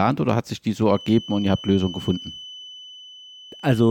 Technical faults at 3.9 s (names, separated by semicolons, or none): feedback whistle